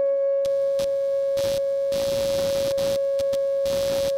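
A music clip with computer activity noise from 0.45 s to the end: a scratchy, chirping buzz that pulses at around 100 times per second, sitting roughly 15 dB below the music. It tracks the computer's processor, graphics or mouse activity rather than the music, because load changes disturb the shared ground of the audio circuit. On a spectrogram it shows as evenly spaced vertical striations laid over the music, and in the waveform as small repeating spikes riding on the signal.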